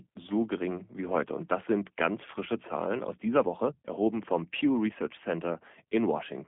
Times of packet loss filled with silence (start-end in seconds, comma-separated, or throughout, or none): none